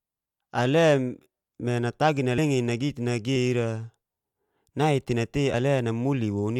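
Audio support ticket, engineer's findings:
Compressed frames skipped at 2.37 s and 5.53 s. Speech jumps ahead roughly 70 ms, then 50 ms. Frames missing from the file or refused by the decoder.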